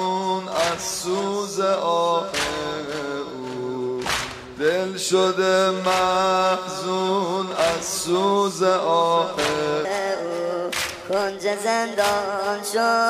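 From 9.85 s to the end, the sound abruptly turns hurried and bright, running about 1.37 times too fast, with its pitch raised by roughly five semitones at the same moment. This is a section at the wrong speed. Because tempo and pitch climb together rather than separately, the passage was likely played back or edited against a mismatched clock, so its samples were read out faster than they were captured.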